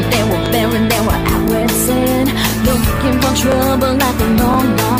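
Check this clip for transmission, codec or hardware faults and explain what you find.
The clip shows one fault, overlapping chunks, at five joins: 0.46–0.48 s, 1.48–1.50 s, 2.50–2.52 s, 3.52–3.54 s and 4.54–4.56 s. The audio was handled in 1.0 s chunks, and each new chunk began 20 ms before the previous one ended, so that 20 ms slice plays twice at every join. The result is a brief click or stutter recurring about once a second throughout the audio.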